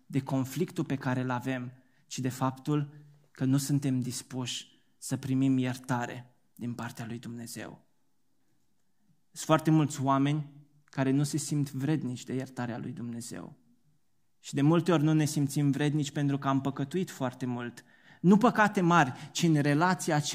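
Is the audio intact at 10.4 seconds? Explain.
Yes, the speech at 10.4 seconds is intact, with no audible fault at that moment.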